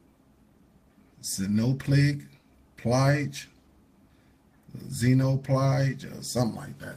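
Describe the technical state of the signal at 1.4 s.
At 1.4 s the signal is intact, with no dropout, distortion, clipping or other technical fault to be heard.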